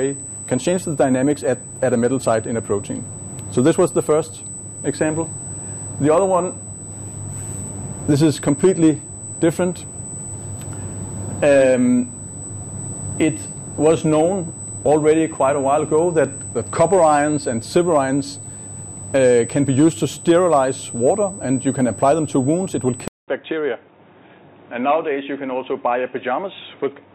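A USB whine runs through the whole recording: a steady, piercing tone at 8 kHz, about 15 dB below the sound itself, as current drawn in the bus's 125-microsecond microframes leaks in through power or ground. A spectrogram shows one unbroken horizontal line at 8 kHz.

At 23.08 s the audio drops out for 200 ms. From then until the end it sounds dull and boxy, with nothing above 3.8 kHz. The loudness stays about the same and there is a faint new noise floor far below the signal. This is likely the input switched to a poorer device. The spectrogram shows a short blank gap and then a hard ceiling at 3.8 kHz.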